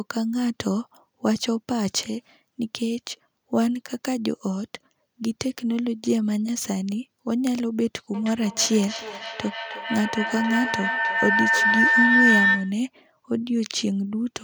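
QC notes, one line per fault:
8.14–12.85 s, feedback howl: two devices in the same room are on one call, and the path from microphone to loudspeaker and back returns more level than it sends. Each pass reinforces the frequencies the loop favours, so the sound narrows into a tone around 2 kHz, with the loop's round-trip delay about 0.3 s. It peaks about 4 dB above the speech and cuts off at 12.85 s.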